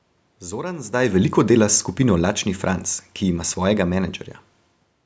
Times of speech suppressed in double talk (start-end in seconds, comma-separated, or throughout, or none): none